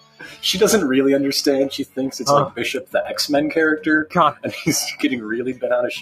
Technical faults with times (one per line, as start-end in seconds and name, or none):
0.00-6.01 noise suppressor applied to music or sounds
0.00-0.43 sound cut by the noise suppressor